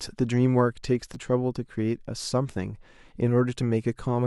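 At 1.14 to 1.16 s the speech briefly jumbles as chunks play out of order. A 10 ms chunk arrived late and was played one chunk after its proper place, so two short slices swap. The three hard joins this creates give a smeared instant. Unlike a dropout, no audio goes missing and no gap or silence appears. Every piece is present, just reordered.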